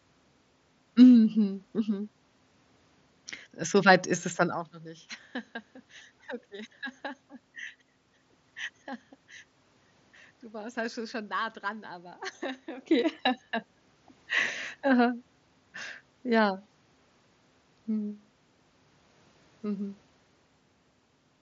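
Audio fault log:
No system faults are present; the signal carries speech over a wideband Bluetooth mSBC headset link that passes content up to 8 kHz, with only a faint graininess on louder passages.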